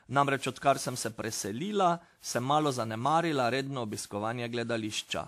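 Throughout the speech, generation loss gives a swirly, hollow, smeared sound with blurred consonant attacks, likely from repeated lossy re-encoding, around seven passes, consistent with WMA 1 near 96 kbit/s. A spectrogram shows nothing above 14.7 kHz.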